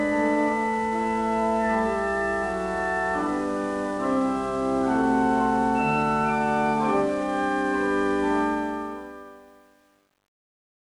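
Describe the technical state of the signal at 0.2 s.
At 0.2 s the signal is intact, with no dropout, click, distortion or level disturbance.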